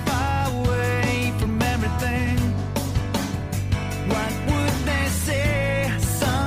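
At 2.75 s the audio switches abruptly to an adaptive stream at a lower bitrate, likely because the connection slowed. Codec artefacts rise, consistent with a drop from around 64 to 24 kbit/s. Unlike a dropout, no gap occurs, and the degradation persists to the end.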